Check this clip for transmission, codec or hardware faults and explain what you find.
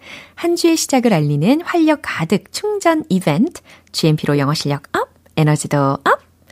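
No transmission, codec or hardware faults are audible in this speech recording, and the signal holds steady throughout without dropouts, distortion or interruptions.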